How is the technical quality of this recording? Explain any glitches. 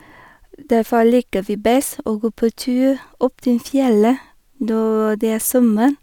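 No technical glitches can be heard in this speech recording. There is nothing in it that needs explaining.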